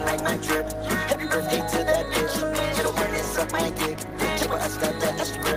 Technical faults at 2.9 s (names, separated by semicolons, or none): none